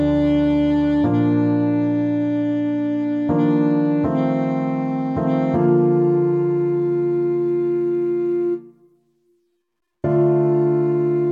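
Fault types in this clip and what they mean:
Adaptive stream starting at a low bitrate: the player began on a lean version of the stream, with dull sound and stronger artefacts until 6.0 s, then jumped abruptly to fuller treble. That fits AAC stepping from 48 to 96 kbit/s. Unlike a rebuffering stall, there is no gap.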